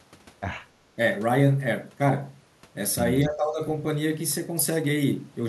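At 3.25 s the speech suddenly sinks, staying down until about 3.61 s and bottoming out somewhere around 15 dB below its normal level before recovering. That's speech suppressed in double talk, most likely: the far end was talking at the same moment, and the echo canceller couldn't tell this talker apart from its own loudspeaker echo, so it pulled everything down together for that third of a second or so.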